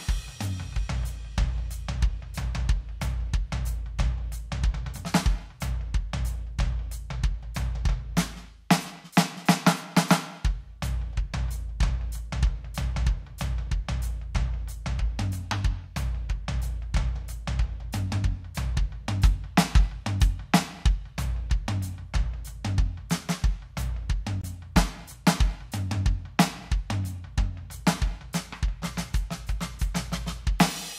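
At 24.41 to 24.44 s the music cuts to silence for 22 ms, likely a Bluetooth stall, showing as a flat waveform gap and blank spectrogram stripe.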